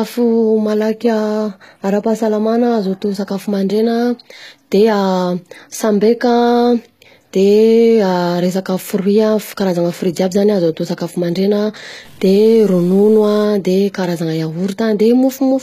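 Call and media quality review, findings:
Whole clip: treble is rebuilt rather than original. Sibilants are gritty and metallic, and codec damage is plainly audible. Nothing above 14.9 kHz. Likely HE-AAC compression; the sound fits HE-AAC v2 near 20 kbps. Upper band is copied from lower bands, so harmonics misalign across the crossover.

12.05 to 13.45 s, just after "atao sakafo mandregna": noise and distortion ride on the waveform and fill the pauses too. Likely a stuck bit in the converter or data line. One bit is held fixed, so about half the samples are off by that bit's weight.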